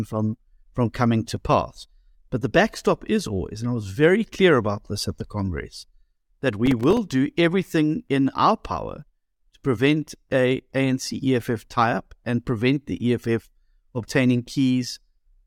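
From 6.66 to 6.98 s the speech carries a burst of processor overload crackle. The processing could not finish its small buffers on time, and about ten deadlines were missed in quick succession. Each miss drops a silent gap of a few milliseconds with hard edges, so the speech sounds gritty and torn. On a waveform this shows as short flat dropouts cutting the signal abruptly. On a spectrogram the edges appear as a cluster of thin vertical broadband streaks.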